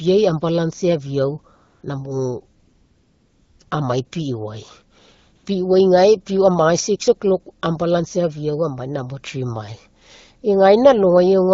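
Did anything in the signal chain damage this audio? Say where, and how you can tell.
Yes. At 1.55–1.83, 2.59–3.59, 3.63–3.71 and 5.35–5.45 s the real background gives way to smooth, steady hiss: AMR comfort noise, where the phone stopped sending speech frames and the receiver synthesised filler.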